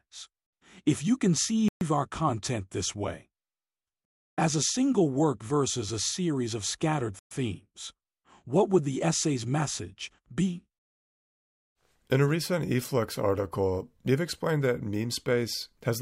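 At 1.68 s, just before "our content this way", and again at 7.19 s, after "a series of scattered", the speech drops to silence for 127 ms and 121 ms, then resumes. These are Bluetooth stalls, likely interference delaying packets until the headphone buffer ran dry. Each shows as a flat waveform and a fully blank vertical band on a spectrogram.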